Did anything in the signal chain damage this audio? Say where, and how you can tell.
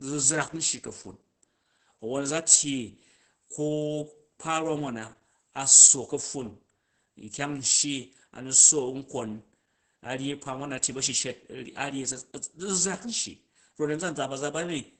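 Yes. Throughout, the speech sounds muffled, hoarse and faintly robotic, with nothing above about 8.8 kHz. That points to the codec stage: Opus voice compression in SILK wideband mode, coding the excitation coarsely at a bitrate that fits roughly 10 kbps.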